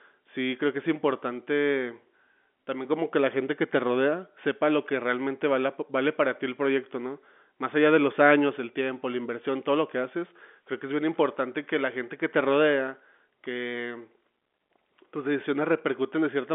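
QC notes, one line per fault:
No faults found; the speech occupies a telephone band of about 200 Hz to 3.5 kHz with nothing above 3.7 kHz, which fits G.711 mu-law telephone coding.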